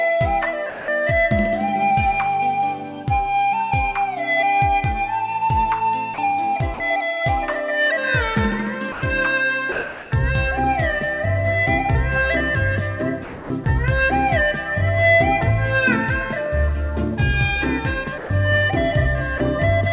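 Audio carried over a narrowband call path, with nothing above 4 kHz, consistent with G.711 mu-law at 64 kbps, shows sound dropped by the voice detector at 0.70–0.88 s, 6.14–6.18 s, 6.74–6.80 s, 8.92–9.02 s, 9.72–10.12 s, 18.18–18.30 s and 19.38–19.40 s. In each gap the sound gives way to steady synthetic noise, likely because the sender's detector classed it as background and sent comfort noise instead. Between 13.24 and 13.66 s the sound is chopped by the voice detector, with about 280 ms of it swapped for comfort noise as transmission likely switched on and off repeatedly.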